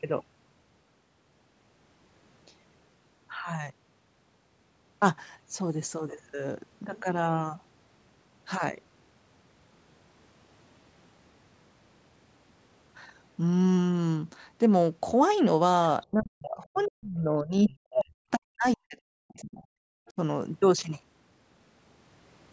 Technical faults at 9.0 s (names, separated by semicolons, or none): none